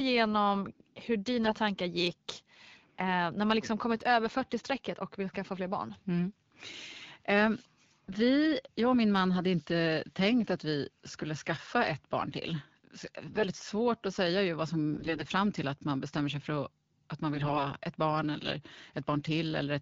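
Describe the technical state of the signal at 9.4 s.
At 9.4 s the signal is intact, with no fault present.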